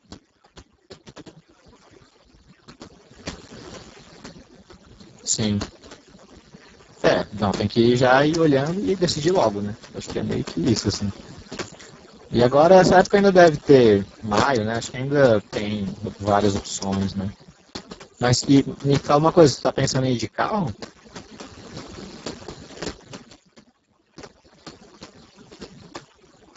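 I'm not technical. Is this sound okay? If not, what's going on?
No. A noise reduction tool was set far too strong, so overdone noise removal strips quiet parts of the speech along with the background noise, leaving the speech over near-silence with twinkling specks throughout. The speech was also squeezed through the Speex codec at a very low quality setting, an old internet-calling format, which leaves it hoarse, noisy and almost robotic from start to finish, with nothing above about 7.7 kHz.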